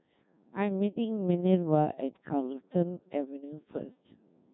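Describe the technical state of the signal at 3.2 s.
At 3.2 s, as throughout the clip, the speech carries Codec 2 vocoder damage. The voice is rebuilt from pitch and envelope as sine waves, which fits a rate near 1.6 kbit/s. It sounds robotic and buzzy with nothing above 3.9 kHz, rather than the watery smearing of an ordinary low-bitrate codec.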